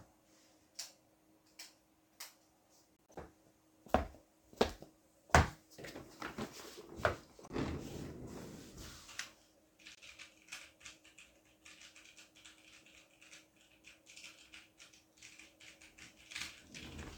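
Corrupt frame decoded at 2.97–3.17 s, 7.44–7.52 s and 9.95–9.99 s: damaged compressed frames were played anyway, misplacing energy into brief chirps and noise bursts, peaking at about −50, −40 and −50 dBFS.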